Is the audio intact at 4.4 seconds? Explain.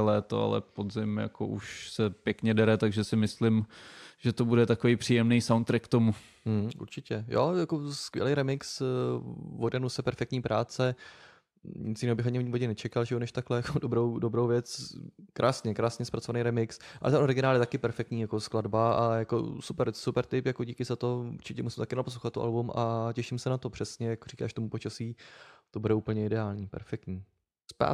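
No. At 4.4 seconds the speech carries clock slip clicks, which run from 0.13 to 27.88 s. Faint ticks recur about ten times a second. The likely cause is two unsynchronised clocks differing by around 200 ppm, dropping or repeating one sample at each slip.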